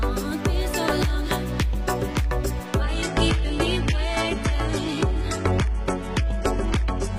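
An adaptive stream dropping to a lower bitrate sets in at 2.82 s and lasts to the end. The connection evidently slowed, so the player switched to a leaner encoding with no gap. The quality change is abrupt. Everything above 11.8 kHz vanishes, the remaining upper range takes on a synthetic, swishy sheen, and smearing artefacts rise. This fits a switch from roughly 96 kbit/s AAC to a very low-rate HE-AAC stream near 16 kbit/s.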